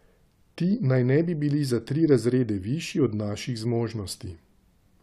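A speech recording, with nothing technically wrong with it.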